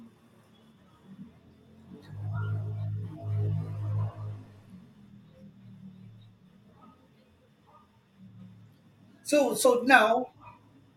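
At 9.64 s the speech jumps forward: compressed frames were skipped, dropping roughly 40 ms, which fits two 21.3 ms frames.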